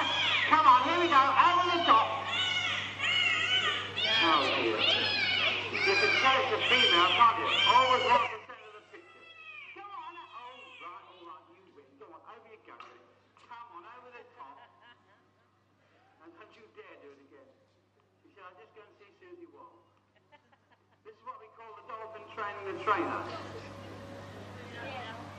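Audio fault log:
8.17–8.55 s, zipper noise: the level drops by roughly 25 dB in coarse 6 dB steps at around ten per second, with no smoothing between them. Each abrupt gain jump puts a small discontinuity in the waveform, heard as a quick ticking that rides on the fade.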